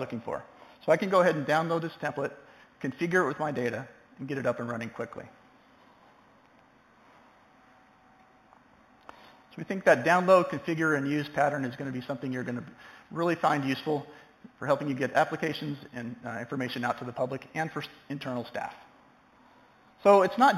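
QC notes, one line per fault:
Throughout: imaging from linear upsampling. The top end goes dull near 4 kHz, and a faint mirrored copy sits between 4 and 8 kHz, around 25 dB down, giving a light metallic shimmer. That fits an 8 kHz source stretched by straight-line interpolation, which barely filters.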